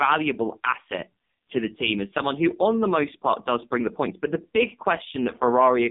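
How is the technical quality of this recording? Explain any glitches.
Pretty rough, honestly: the whole thing has gone through an AMR narrowband mobile codec. Nothing above 3.7 kHz or below 200 Hz survives, and the very low bitrate, which fits AMR-NB's 5.15 kbps mode, leaves the speech buzzy and synthetic throughout.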